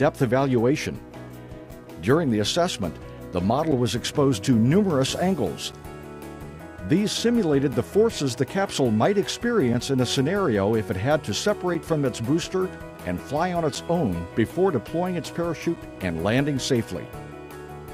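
Gaps between chunks occur at 1.71, 3.72, 5.72, 7.73, 9.74, 11.74, 13.75 and 15.76 s. The audio arrives in 2-second pieces, and at each join playback pauses for about 7 ms before the next piece begins. Nothing is dropped; the sound simply stops and resumes. Each join is a brief, hard-edged hole, a tiny tick of silence, and the holes recur at a steady two-second rhythm.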